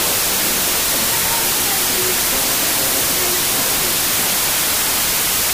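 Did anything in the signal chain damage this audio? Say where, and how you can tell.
Yes: wrong sample width at format conversion. 16-bit data read as packed 24-bit fill the spectrogram with broadband noise throughout, burying the original, which plays 1.5 times fast and higher in pitch.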